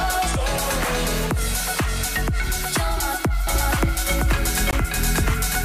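From 3.47 s to the end there's a doubled audio track: a second full-band copy comes in abruptly at about the same level, trailing by roughly half a second, with no decay or room colour. It's likely the same audio picked up again through a slower path, or an edit holding two copies out of step.

At 4.71 s there's a Bluetooth dropout, a hole of about 19 ms. The sound then resumes as though it kept playing underneath. That gap fits a single packet that likely didn't reach the headphones in time.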